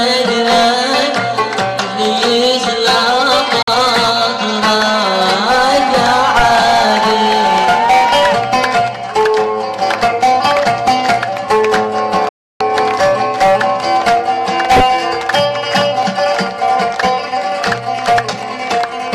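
At 3.62 s the sound drops out for a moment and is back by 3.68 s. It's a digital broadcast dropout: the receiver lost good frames and muted, ramping down in about 3 ms, so it's a clean hole rather than a click. The gap fits a couple of lost frames. The bigger one runs from 12.29 to 12.61 s, roughly a third of a second of silence, pointing to a dozen or so frames lost, and that audio never comes back.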